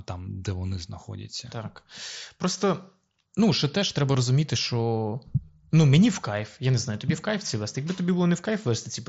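Speech carried over a Bluetooth headset link, where the mSBC wideband codec leaves the audio capped near 8 kHz with a light grain on louder syllables. Concealed Bluetooth headset packet loss occurs twice: at 4.14 s, between "що теж треба" and "розуміти що ну мені", a brief gap fitting one lost 7.5 ms frame, and at 7.96 s, about 15 ms long, fitting two frames. The receiver filled each gap with a copy of the preceding waveform rather than silence. That is why no mute is heard at either point.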